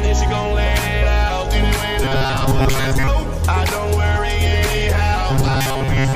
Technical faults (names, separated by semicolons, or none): robotic sound from repeated short buffers